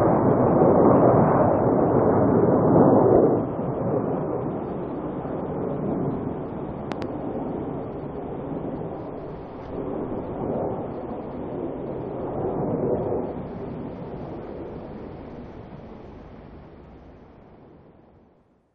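A sharp loud pop sits at 3.16–3.19 s, slightly above the surrounding audio. A much stronger double pop follows at 6.92–7.06 s. The sound carries on underneath both. Each is likely a brief voltage spike, such as a switch or connector glitch, entering the signal path.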